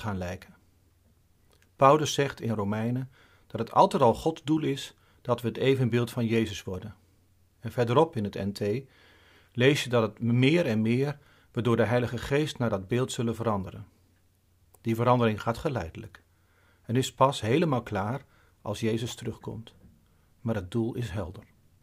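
A speech recording with nothing technically wrong with it.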